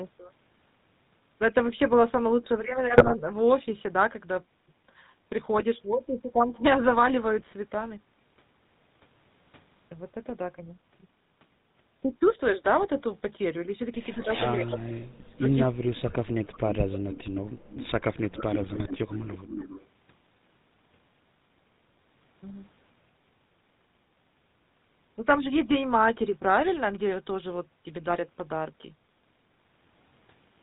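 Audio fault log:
2.98–3.13 s, 5.58–5.63 s, 7.39–7.49 s, 15.19–15.26 s, 18.62–18.88 s: GSM bit errors. Squawks, pops and gargling occur where corrupted filter, pitch or gain values bend the spectrum or level over consecutive frames.
Throughout: GSM full-rate codec. Plainly audible buzzy, gravelly roughness with nothing above 4 kHz, from the 13 kbps pulse-excited vocal-tract model with decimated excitation.
14.14–14.28 s and 14.56–16.9 s: speech suppressed in double talk. The speech dips by about 15 dB, then by up to about 40 dB across roughly 2 s, likely an echo canceller turning down both talker and loudspeaker echo.
14.18–14.78 s, 15.5–15.58 s, 16.93–17.4 s, 17.69–17.91 s, 18.34–19.86 s: echo leak. A copy of the voice returns 257 to 275 ms later, about 15 dB below the speech (about 30 dB at 15.5 s), likely residual loudspeaker echo the canceller missed.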